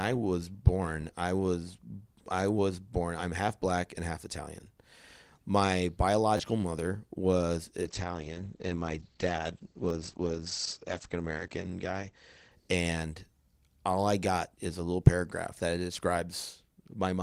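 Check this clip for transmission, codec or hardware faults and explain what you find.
Two kinds of fault turn up in this speech: two short stutters from a repeated buffer, and a stretch of degraded quality from a call bitrate drop.

Repeated buffer, at 6.37–6.40 s and again at 9.89 s. When fresh audio failed to reach the output in time, the device replayed the block it had just played. Each repeat lasts about 11.6 ms, which fits a 512-sample buffer. At 6.37 s the block sounds two extra times, giving a short stutter and dropping around 20 ms of speech. At 9.89 s a single repeat makes a short stutter and loses about 10 ms. Each repeat has a hard join.

Call bitrate drop, from 7.82 s to 13.25 s. The call's bandwidth estimate fell, so the encoder was pushed from 32 kbps down to 12 kbps and coded the speech far more coarsely. The audible bandwidth also shrinks from about 20 kHz to 8 kHz, cutting away the top end. 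For roughly 3.9 s at the lowest rate the speech sounds muffled and rough, with a watery texture, before quality climbs back.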